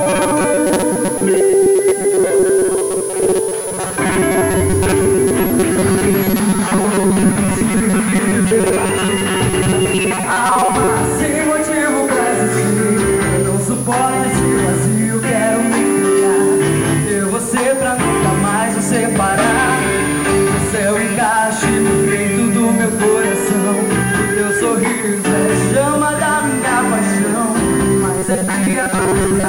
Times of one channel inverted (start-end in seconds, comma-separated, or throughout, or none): none